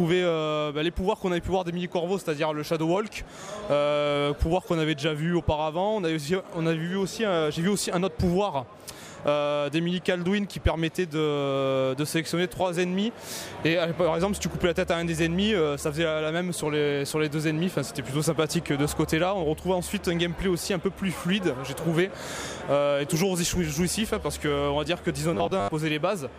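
From 25.34 to 25.71 s the sound turns into robotic sound from repeated short buffers: a rigid, metallic 100 Hz buzz, likely from roughly half the audio being replaced by repeats of a 10 ms buffer. Unlike plain dropouts, there are no silent gaps.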